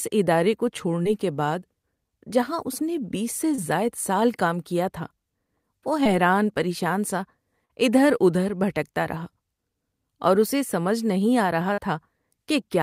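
Short concealed packet loss occurs five times in this speech. The first is at 1.03 to 1.07 s. The second is at 3.55 to 3.60 s, just after "اس نے بیس سے". The third is at 6.04 to 6.07 s, before "پریشان سا". The last two run from 7.65 to 7.71 s and from 11.73 to 11.79 s. Each time about 20 ms of audio, or 40 ms in the last two, arrived too late. The decoder patched the gap by extending the preceding sound, then crossfaded back. Each one is heard as a brief smear or wobble.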